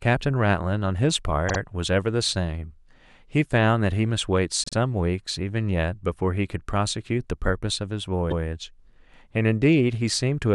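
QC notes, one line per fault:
1.48–1.58 s, 4.64–4.74 s and 8.30–8.40 s, repeated frames: the decoder replays a short stretch of compressed audio, a 52 ms block played twice more at the first two points and a 105 ms block played once more at the third, so each spot stutters and runs about 105 ms longer. Unlike a dropout, nothing goes missing. Unlike an echo, the copy is exact and follows straight on rather than overlapping the sound.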